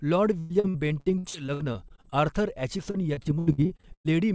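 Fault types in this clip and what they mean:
Repeated packet loss (robotic sound): chunks of audio kept going missing or arriving late, and each hole got patched by stretching the last bit of sound, so it comes out choppy and robotic. It hits in two bursts, 0.4 to 2.14 s and 2.77 to 4.07 s, with roughly a third of each stretch filled in rather than real and the worst holes running about 0.1 s. The dull top end, nothing above 8 kHz, fits a G.722 call path.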